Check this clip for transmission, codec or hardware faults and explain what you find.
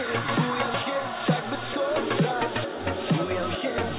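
No transmission, codec or hardware faults are audible anywhere in the clip.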